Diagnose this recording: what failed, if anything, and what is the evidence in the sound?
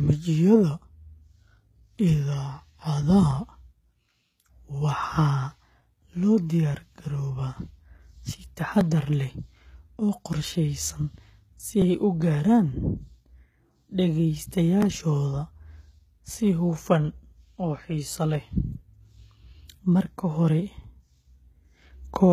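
At the codec stage, the speech carries plainly audible coding damage throughout, with nothing above 14.9 kHz, likely from HE-AAC compression at a bitrate around 20 kbps. Spectral band replication rebuilds the treble from copied lower bands, so harmonics misalign and s sounds turn gritty, metallic or lispy.

At the buffer stage, processing in overlapping chunks means each new block began before the previous one ended. At 8.81, 11.82 and 14.82 s, about 3 s apart, 7.07 ms of audio plays twice at the join, heard as a click or stutter.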